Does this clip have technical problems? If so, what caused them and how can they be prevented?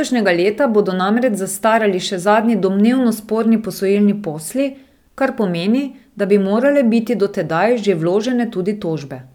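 No, there are no technical faults to be heard in this clip. Nothing here needs fixing or preventing.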